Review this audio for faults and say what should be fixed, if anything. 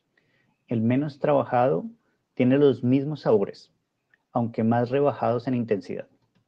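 Nothing needs fixing: the speech signal shows no audible technical faults anywhere in the recording.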